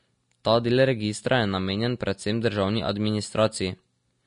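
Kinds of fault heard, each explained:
Vorbis compression: throughout the speech the treble has a hissy, grainy wash, consonant attacks are smeared, and nothing is heard above 10.6 kHz, the likely mark of a lossy Vorbis encode. At a low rate, consistent here with something near 37 kbps, the encoder trims the top band and quantises the remaining high-frequency detail so coarsely that it turns into noise of similar energy, which roughens the voice's tone plainly.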